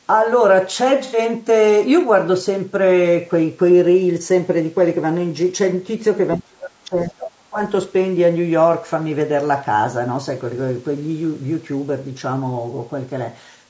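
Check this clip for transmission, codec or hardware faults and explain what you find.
Yes, there's real damage here, three faults in all, though the lack of anything above 8 kHz is just the call's microphone processing band-limiting the speech.

Low-delay AAC compression runs throughout, likely AAC-ELD at a low rate around 32 kbps. At that low bitrate, noise fills in between the harmonics, so the speech sounds rough and grainy.

AAC frame loss with concealment hits from 1.04 to 1.18 s. About 90 ms went missing, fitting three lost frames, and the decoder's patched-in spectrum leaves a smeared, noisy blip.

Speech suppressed in double talk shows up from 6.37 to 7.57 s, likely the echo canceller ducking the talker while the far side spoke, with the deepest drop around 35 dB.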